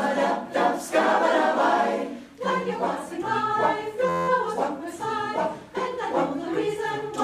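At 4.09 s there's a system hang loop lasting until 4.28 s: something froze and the hardware kept replaying one tiny 11.6 ms chunk, which fits a 512-sample buffer, about 17 times over, so you hear a flat buzz at roughly 86 Hz.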